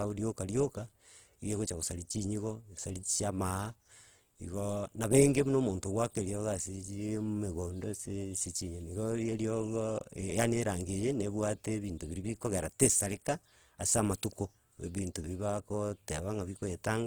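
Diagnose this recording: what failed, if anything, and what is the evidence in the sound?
The codec stage failed. Throughout the speech, voiced sounds turn rough, grainy and noisy, yet the spectrum still reaches about 20.2 kHz. This is likely Opus compression in CELT mode. Starved bands are filled with folded spectrum or noise, which fits a bitrate near 16 kbps.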